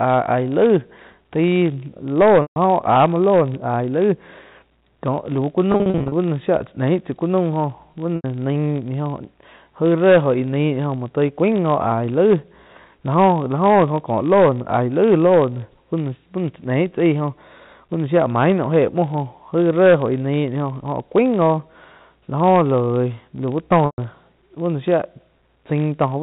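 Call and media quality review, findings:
Filter restarted on every block: steady 50 Hz tick-buzz under the speech for the whole clip, rising and falling with level. Likely a processing-chain filter being reset each block, so every block starts from zero state and opens with a small transient. The 50 Hz rate implies 20 ms blocks.

Packet loss with pitch repetition, 2.42–2.56 s: about 140 ms dropped, the receiver holding the last pitch period as a brief buzzy sustain. Packet loss with pitch repetition, 5.72–6.12 s: about 240 ms lost in scattered short gaps, none over 40 ms, giving repeated small buzzy holds. Also 8.16–8.24 s (80 ms) and 23.86–23.98 s (120 ms). The loss pattern points to 20 ms packets.

G.711 A-law path at 64 kbps: band-limited to 4 kHz, with codec noise faint or absent.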